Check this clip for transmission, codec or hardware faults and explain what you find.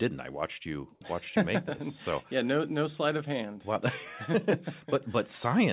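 No transmission, codec or hardware faults can be heard anywhere in the speech. The audio has the narrow band of a normal call path, with nothing above 4 kHz, which fits a telephone-grade codec such as G.711.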